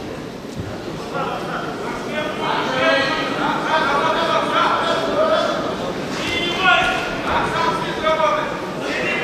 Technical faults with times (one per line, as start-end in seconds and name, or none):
none